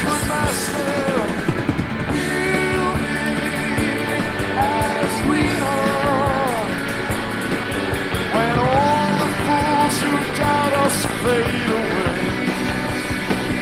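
No technical faults can be heard.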